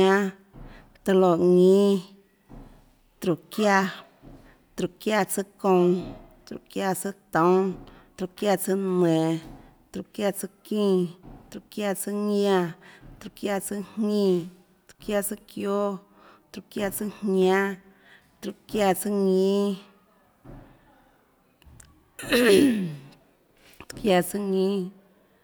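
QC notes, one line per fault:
No faults found in the speech recording. Nothing here needs flagging.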